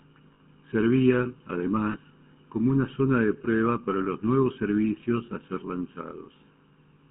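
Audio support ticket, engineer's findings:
Channel delay (comb filtering), throughout. Hollow, phasey tone with fixed spectral notches. One channel lags the other by about 0.7 ms before the mono sum. Shared content cancels at evenly spaced frequencies, with the first notch around 700 Hz and further notches repeating above it. Probable component: stereo-to-mono downmix or capture path with a misaligned channel.

GSM full-rate codec, throughout. Buzzy, gravelly roughness on the voice. The line band runs from 150 Hz to 3.5 kHz, with nothing above. The coder models the vocal tract and excites it with a sparse, regularly spaced pulse train, so the fine harmonic detail is lost. The damage is plainly audible and fits 13 kbps full rate. Probable component: the cellular leg.

Lost GSM frames at 0.34–0.41 s (60 ms), 1.92–1.96 s (20 ms) and 3.42–3.47 s (20 ms). Each gap is held as a short, rough metallic ring. 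The decoder repeats the parameters of the last good frame in place of the bad frames. The longest repeat is at 0.34 s. Probable component: the radio link.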